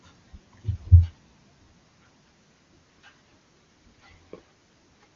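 No technical faults can be heard in this speech clip, which comes through the AMR wideband (HD Voice) codec at its highest rate.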